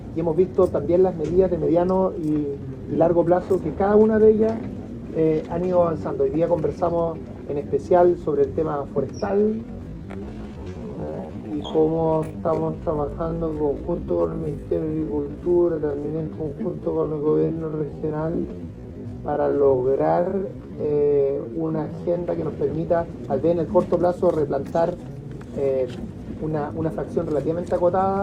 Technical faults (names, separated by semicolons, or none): time-stretched section